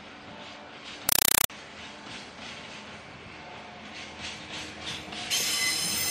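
From 1.09 to 1.50 s there's a compressed stream played as audio: an AC-3 bitstream gets treated as plain samples instead of being decoded, so you hear harsh, very loud static chattering at 31.25 Hz, 4 ms bursts padded with silence, which fits roughly a 192 kbps stream.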